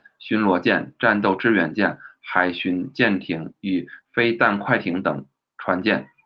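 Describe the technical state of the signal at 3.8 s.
At 3.8 s the speech is intact, with no dropout, glitch or other fault at that moment, only the steady character of the call path it passed through.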